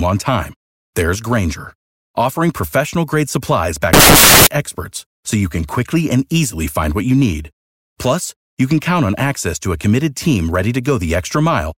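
A speech recording in which, from 3.93 to 4.47 s, between "offering professional grade supplies" and "experts so you can", the sound collapses into loud, harsh broadband noise: samples built from the wrong bytes. The reader misassembles each sample's bytes, so the rapidly changing low-order bits dominate every value. Unlike clipping or a codec glitch, the underlying signal is unrecognisable for the whole half-second.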